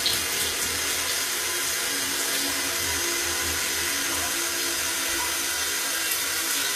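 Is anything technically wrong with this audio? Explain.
Yes. Throughout, the sound was likely HE-AAC compressed at a low bitrate, around 24 kbps, with treble rebuilt from copied lower bands. Highs turn gritty and metallic, with nothing above 14.9 kHz.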